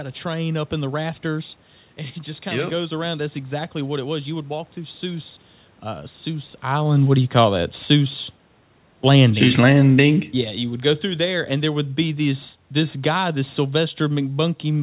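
From 8.92 to 10.24 s, and again from 10.84 s to the end, automatic gain falling pulls the level down gradually, about 4 dB in the first stretch, so speech and room noise sink together. The waveform envelope tapers steadily while the spectrogram dims evenly across bands.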